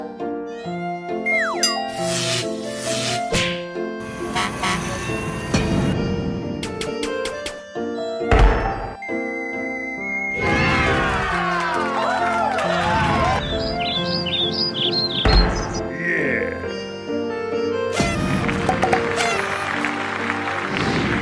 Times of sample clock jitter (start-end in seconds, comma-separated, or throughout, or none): none